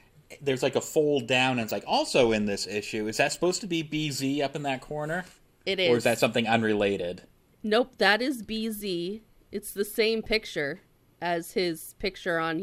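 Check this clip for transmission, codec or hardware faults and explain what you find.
DAB burbling appears four times in the speech: 1.62 to 1.90 s, 3.26 to 3.36 s just before "to be", 6.13 to 6.21 s just before "something unrelated", and 10.23 to 10.26 s right after "the same". Weak reception let bit errors, roughly 0.1 to 0.2 percent, slip past error correction into the MP2 data. Corrupted samples put short blips of noise into individual sub-bands, and corrupted scale factors make sub-bands leap in level for up to a frame, giving burbling noise blips over the speech.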